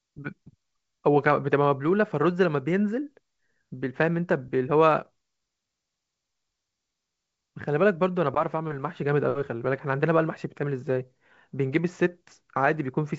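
Nothing stood out on listening to this speech, which comes through G.722 wideband telephone coding at 64 kbit/s.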